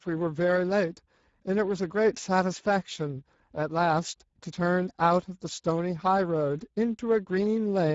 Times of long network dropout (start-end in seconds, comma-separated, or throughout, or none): none